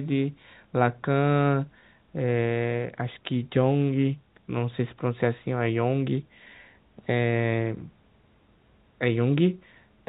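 A speech recording with no technical faults to report.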